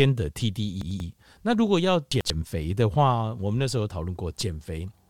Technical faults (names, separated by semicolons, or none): frames out of order